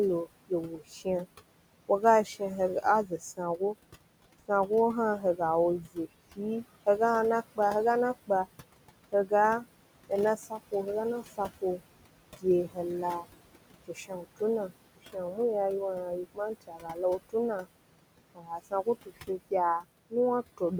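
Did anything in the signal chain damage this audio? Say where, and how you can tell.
Yes, at the call-processing stage. Noise suppressor artifacts run through the whole recording: the room noise, sitting about 14 dB under the speech, is pulled down by about 21 dB in the pauses and swells back under the voice as per-frame band gains shift.

The noise suppressor also cuts speech, from 0.25 s to 20.72 s, adding up to roughly three seconds. Soft consonants and word endings get misjudged as steady noise and attenuated by up to about 22 dB, so they sound swallowed, faint or clipped short.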